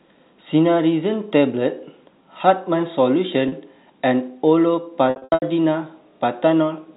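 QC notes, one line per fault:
3.48 s, packet loss with pitch repetition. About 40 ms of audio drops out. The receiver fills the gap by repeating the last pitch period. The sound briefly holds and turns slightly buzzy, then carries on.
5.10 to 5.42 s, packet loss with pitch repetition. About 260 ms is lost in scattered gaps over 320 ms. The longest gap runs 80 ms. Each gap is filled with a repeated pitch period that fades out. The sound turns buzzy, with brief dips toward silence.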